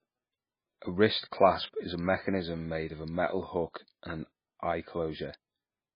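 It's a short speech recording, and the whole thing has that heavy MP3 compression sound, most likely from a very low-bitrate MP3 encode, roughly the 16 kbps range. Nothing comes through above about 5 kHz, because the encoder chopped off the top end to save bits. The damage is heavy throughout, with that watery, swirly texture you get when weak frequency lines keep dropping in and out from frame to frame.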